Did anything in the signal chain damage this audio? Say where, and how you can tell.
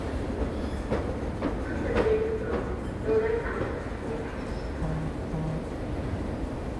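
No, nothing in the signal chain has damaged this recording of sounds. No stage from capture through to playback has left a mark on it.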